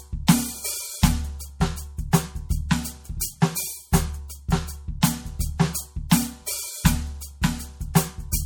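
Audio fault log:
Throughout: MP3 compression, plainly audible across the music. The upper detail has a watery, swirling quality as quiet frequency lines drop in and out from frame to frame, likely from an encoder starved of bits, which fits a bitrate around 64 kbps. That flickering texture, rather than a steady dull top end, is what separates it from simple low-pass filtering.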